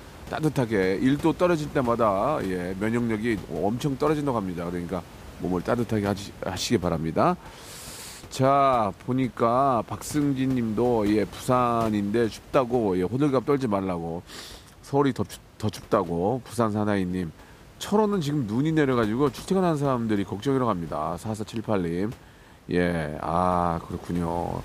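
Nothing in the system has gone wrong here: the speech comes across intact, with just the room's own background noise sitting about 20 dB beneath it as part of the recording.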